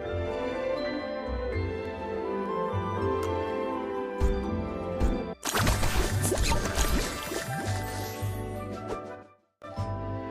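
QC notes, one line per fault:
1.70–2.46 s, CD scratch ticks: six short regular ticks, the longest around 3 ms. A scratch spoils data beyond correction each revolution, so the player patches or mutes it.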